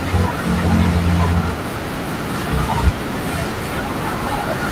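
No technical faults can be heard anywhere in the recording.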